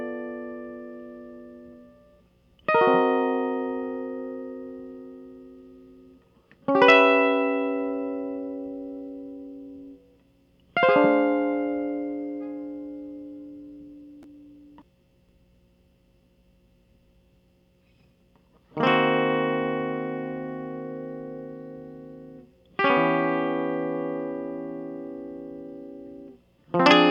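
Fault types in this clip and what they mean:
There are no fault types to list for this music clip.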